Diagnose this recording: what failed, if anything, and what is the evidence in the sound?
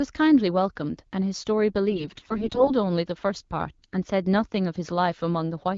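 AMR bit errors on the radio link damage the sound from 1.92 to 2.72 s. Pitch and level hold, but the sound turns hoarse, scratchy and gargly. Heavy flipping of the weakly protected bits, roughly 15 percent, misplaces the excitation pulses and corrupts the fine parameters, while the AMR-WB coding at 12.65 kbit/s stays clear.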